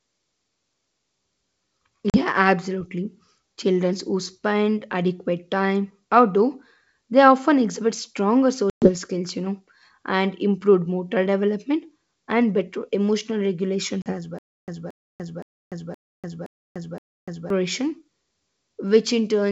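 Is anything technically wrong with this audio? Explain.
Yes, there are two problems: dropouts from packet loss on an ADPCM call, and a stretch of stutter with silent gaps.

The speech cuts out abruptly three times: at 2.10 to 2.21 s, 8.70 to 8.90 s, and 14.02 to 14.14 s. After each gap it comes back slightly distorted, and that settles within tens of milliseconds. About 40 ms of audio is missing at the first and third points (a couple of packets), and 120 ms at the second (around seven). The lost packets were filled with silence. The ADPCM decoder's predictor and step size then no longer matched the sender's, so they needed a short time to resync.

From 14.39 to 17.50 s, a burst of about 226 ms plays six times at a steady 519 ms interval, with roughly 293 ms of dead digital silence between repeats. Whatever should have played during that span never arrives. This pattern is likely a stalled player or stream: at each retry it replayed the last fragment it held, then ran out of data and went silent.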